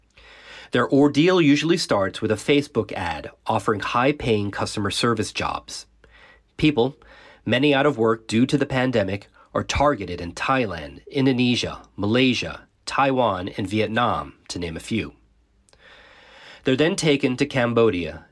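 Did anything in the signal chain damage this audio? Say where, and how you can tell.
No, nothing in this speech recording points to damage at any stage of the chain.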